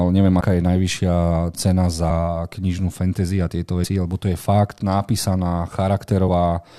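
At 0.40 s, just before "je najvyššia cena", the speech lurches forward with a short smeared blip, not a hard click; the same happens at 3.83 s, between "knižnú fantasy a tieto" and "lebo to je fakt", and again at 6.27 s. These are compressed frames skipped: whole blocks of coded audio never reached the output, so the speech jumps ahead by around 50 ms at the first point and around 70 ms at the later two. That fits two or three frames of about 23 ms each, and overlapping frames soften each join.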